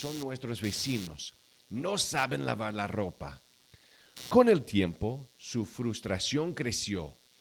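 Computer activity noise runs throughout: machine load changes shift the shared audio ground, adding a buzzing chirp near 150 Hz, roughly 20 dB under the speech.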